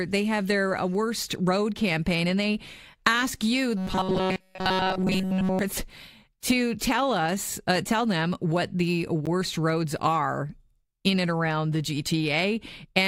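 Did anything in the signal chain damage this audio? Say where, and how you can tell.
Yes. From 3.77 to 5.59 s, just after "and they ask you", the speech turns into a rigid metallic buzz fixed at 188 Hz, with essentially all of it repeated. This is robotic sound from repeated short buffers, likely a driver or buffer stage looping roughly 5.3 ms of audio while fresh data failed to arrive.

At 9.26 s, between "tell them what the" and "roads are in and", a 12.8 ms gap with smeared edges cuts into continuous speech. This is a gap at a join of encoded pieces, where separately encoded segments were spliced with their encoder delay and end padding left in.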